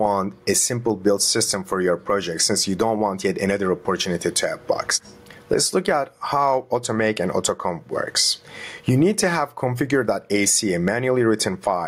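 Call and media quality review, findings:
Gain pumping throughout. Background swells between loud sounds, ducks around 20 dB under each. Likely input gain set too high, fast limiter clamping every peak.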